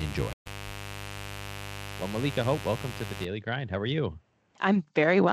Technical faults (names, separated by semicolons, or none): mains buzz; stream reconnect